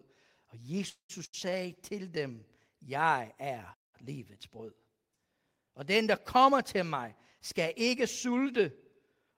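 At 0.89 s the speech breaks into a call audio freeze lasting until 1.11 s. The last sound is drawn out as a fading buzz or hiss for roughly the first half of that span, then about 100 ms of silence follows before the speech picks up exactly where it left off. Nothing is skipped. The cause is likely packets held up in transit draining the jitter buffer, and everything afterwards now runs about 198 ms later than before.

Shortly after, from 1.25 to 1.35 s, comes a burst of packet loss. About 80 ms of consecutive audio never arrived or came too late to play, and the receiver covered the hole with 78 ms of concealment: the preceding sound is stretched and attenuated into a brief held buzz or hiss. When the speech returns it has jumped forward, so the portion that fell in that gap is simply absent.

From 3.73 to 3.95 s there is a playback stall. The output cuts to silence mid-flow for about 196 ms, with no concealment sound at all, then resumes where it stopped. 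A dead gap of this kind, rather than a fading tail, points to the player itself being starved of data or having its output thread blocked, likely the cause here.

The last fault is a jitter buffer speed-up from 7.39 s to the end of the clip. The receiver had built up more buffered audio than its target and trimmed the excess by cutting out many short slices, each a pitch period or so long. Pitch is unchanged, but the speech runs about 6% fast, about 150 ms in total being removed, and the delivery sounds slightly hurried.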